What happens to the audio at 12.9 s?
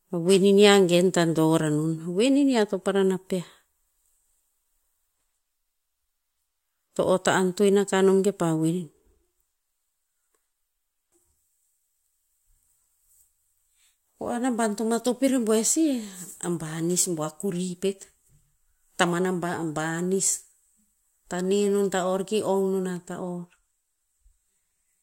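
Nothing goes wrong at 12.9 s; the speech continues intact through that moment.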